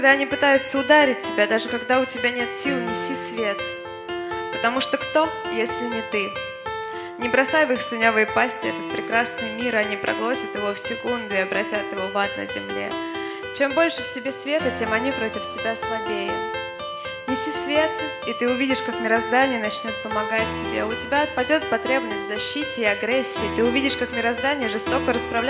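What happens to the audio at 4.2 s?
Nothing goes wrong at 4.2 s: the audio is intact there, with no dropout, click or distortion at that point.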